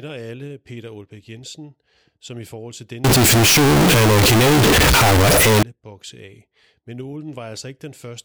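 Float read as integer from 3.04 to 5.63 s in this speech, between "som i forhold til" and "bokse af": the sound turns loud, harsh and square, likely 32-bit float samples decoded as 32-bit integers.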